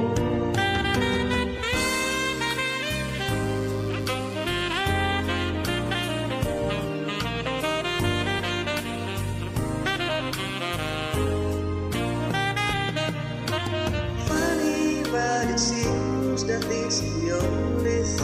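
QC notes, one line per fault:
1.94–4.91 s, mains buzz: a steady, raspy buzz sits well below the sound, roughly 25 dB down. Sharp switching spikes, twice per 60 Hz mains cycle, get in through a dimmer, rectifier or missing shield, spreading harmonics of 60 Hz up to several kHz.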